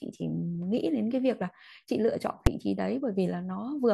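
At 2.47 s there's a single loud bang: invalid numbers at full scale, where a calculation blew up and pinned a 5 ms block to maximum output.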